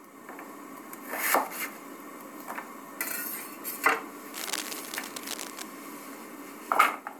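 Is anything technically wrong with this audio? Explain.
Yes. There is cable scratch noise from 4.33 to 5.62 s. For just over a second, dense, uneven bursts of crackle and rustle sit on top of the sound. They are loud, only about 5 dB below the sound itself, so they stand out clearly. The likely cause is a worn cable, plug or control being moved. Its contact resistance jumps about rapidly, and each jump adds a burst of noise.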